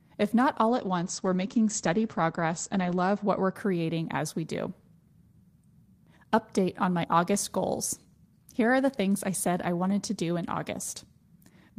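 Call bitrate drop, 0.69 to 3.61 s: starved of bits, the encoder codes coarsely and cuts everything above 8 kHz, leaving a muffled, watery sound.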